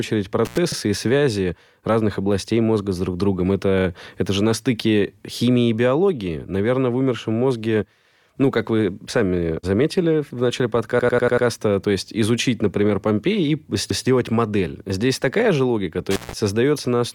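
Speech with intermittent contact at 0.45–0.58 s, just before "и связи разных областей", and at 16.11–16.33 s: crackly dropouts of about 89 ms and 133 ms, where a loose connection opens, leaving hiss rather than a stutter. Repeated frames at 0.72, 3.79, 10.99–11.47 (after "сами заметили в начале") and 13.90–14.06 s replay 32–160 ms blocks, consistent with 32 ms codec frames, so the audio stutters and lengthens rather than dropping out.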